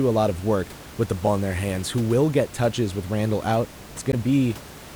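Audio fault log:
1.24–1.27 s and 4.09–4.14 s, damaged data in a compressed stream: two brief glitches cut into the speech. Corrupted bytes made the decoder misread those frames, lose sync and hunt for the next frame header, while the room noise sits about 19 dB below the speech.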